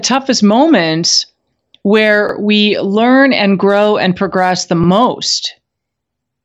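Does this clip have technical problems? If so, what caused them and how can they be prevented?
Yes, there are overlapping chunks. At 2.29–2.34 s, after "moments where", and at 4.84–4.88 s, after "grow and progress the", a 44 ms slice plays twice. This happens because each 2.5 s chunk starts before the previous one ended. Unlike a dropout, nothing goes missing; the audio stutters by repeating. To prevent it, align chunk boundaries so each chunk begins exactly where the last one stopped.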